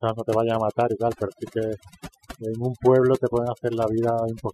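Wi-Fi interference runs throughout the speech. A nearby radio's beacon, every 102.4 ms, is rectified by the audio circuit into a steady ticking around 25 dB below the voice, roughly ten ticks per second. Overdone noise removal is also present throughout. Over-aggressive noise reduction drives frequency bands near its noise estimate almost to silence, taking quiet parts of the voice with them, so the background twinkles.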